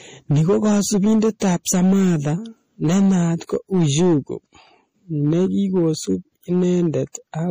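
Hard clipping runs from start to finish: the speech is driven about 6 dB past full scale, so roughly 7 percent of samples are flattened, giving harsh fuzz on louder syllables.

Transcoding between lossy codecs also runs throughout: nothing is heard above 15.4 kHz, with layered coding artefacts that likely come from a low-rate MP3 re-encoded to AAC-LC.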